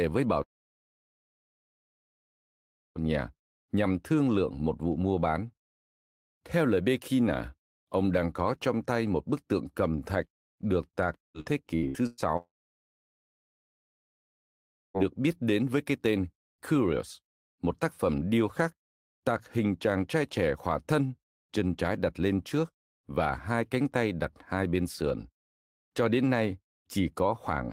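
Long network dropouts at 0.43 to 2.98 s and 12.37 to 14.97 s cut this speech recording twice: right after "với bảo" and again just before "biết đến với cái", roughly 2.5 s and 2.6 s of audio never arrive. Each is likely a connection stall. The receiver stretches the last sound into a brief fading buzz, then falls to near silence for almost the whole gap, and the speech resumes later with the missing stretch simply gone. Repeated packet loss, heard as robotic sound, runs from 11.23 to 12.32 s, just after "cầm thạch được tạc". Five separate holes, the longest 113 ms, are each patched by extending the preceding sound, so about 41% of that second is synthetic fill. The result is a choppy stutter with fragments missing, leading straight into the second dropout.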